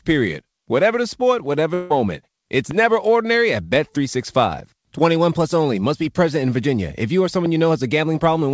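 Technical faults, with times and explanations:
1.74–1.92 s, long network dropout. Right after "the sport whatever", about 0.16 s of audio goes missing. The gap is not silent. A smeared, buzzy continuation of the last sound covers it. This is likely packet loss on the call link. The receiver had nothing new to play, so it stretched the previous sound across the hole. When fresh audio resumes, the lost portion never returns.
2.71–2.73 s and 7.46–7.48 s, loud pop. Each moment has a single sharp pop sitting on top of the speech, which carries on beneath it. The first comes just before "never ordinary at" and peaks about 10 dB above the surrounding level. The second, right after "you or", is milder, about 5 dB above. Each lasts around 20 ms. A likely cause is a brief electrical step, such as a switch, static or driver glitch, shaped into a click by the circuits downstream.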